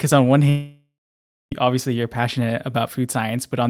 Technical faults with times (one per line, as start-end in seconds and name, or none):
0.49-1.53 long network dropout